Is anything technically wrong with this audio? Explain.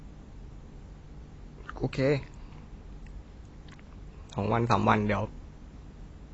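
Yes. AAC compression runs throughout the speech: nothing is present above 8 kHz, and the damage is plainly audible. This is likely a lossy AAC-LC encode at a low bitrate, which fits roughly 24 kbps. With so few bits, the encoder drops the top of the spectrum and coarsely quantises what remains in each frame. The result is a dull, muffled top end and a smeared, warbly texture on sustained sounds and sibilants.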